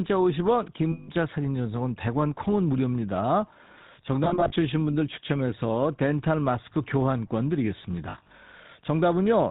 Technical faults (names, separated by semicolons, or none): GSM full-rate codec; lost GSM frames